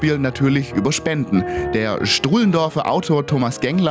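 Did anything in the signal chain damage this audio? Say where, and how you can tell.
Yes. Throughout the clip the gain swings by about 10 dB, so loud and soft passages sit unnaturally close in level and the whole sound feels squashed. That is gain pumping, most likely from microphone gain set far too high at the input, with a fast limiter or compressor in the processing chain clamping down on each peak and releasing in the pauses.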